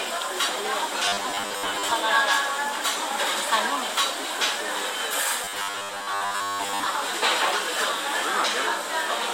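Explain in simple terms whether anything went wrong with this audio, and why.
Robotic sound from repeated short buffers appears at 1.05–1.93 s and 5.44–6.87 s. The sound turns into a rigid metallic buzz at 100 Hz. New audio likely arrived too slowly, so 10 ms snippets were replayed, filling about half the first stretch and most of the second.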